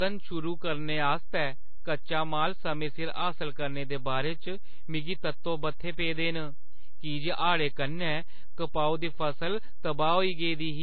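From start to finish, the speech carries a DC offset. The whole waveform sits shifted away from zero by a constant amount. You cannot hear it as such. It eats into headroom and shows as steady energy at the very bottom of the spectrum.

Also present throughout are mixed codec artefacts, with nothing above about 4.5 kHz. This is likely transcoding between lossy codecs. It points to a low-rate MP3 stage re-encoded as AAC-LC. The second encoder spends bits on the first one's artefacts, and both layers of damage are heard together.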